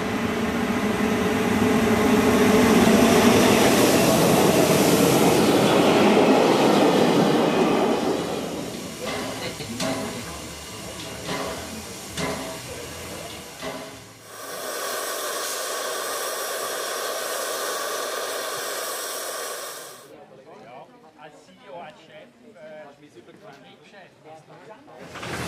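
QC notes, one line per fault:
2.84–2.87 s, 9.58–9.61 s and 18.56 s, broken MP3 bit reservoir: three brief disruptions, each a short burst of noise or a momentary hole of roughly 30 ms or less, with the audio jumping ahead. The likely cause is missing MP3 frames, about 26 ms each. The next decoded frame reaches back into the reservoir for data that is gone and reads unrelated bytes, so its first output is corrupted before decoding resynchronises.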